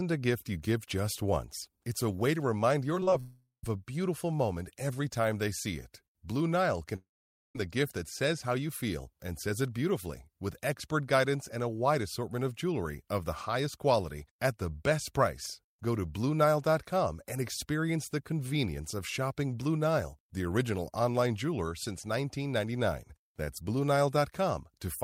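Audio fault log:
2.95–3.20 s, repeated packet loss (robotic sound): six short holes, the longest about 33 ms, are each patched by repeating the preceding sound. About 39% of the span is filled this way, so the speech turns choppy. A spectrogram shows smeared, repeated frames broken by small notches.
3.20–3.64 s and 6.96–7.56 s, long network dropout: the speech stops and is replaced by a continuation of the last sound that fades to silence. The silent part lasts 0.12 s in the first event and 0.49 s in the second, and speech then resumes with a piece missing. The likely cause is audio failing to arrive, with the receiver extending the last sound to cover the gap. The waveform shows a decaying tail that falls to a flat line.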